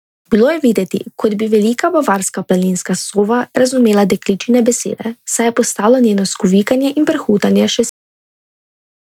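At 7.89 s the speech has a cut-off end: the final stretch of audio was never written out, so the sound stops mid-utterance and drops straight to digital silence with no decay. The waveform flatlines abruptly, and the spectrogram shows energy ending on a hard vertical edge.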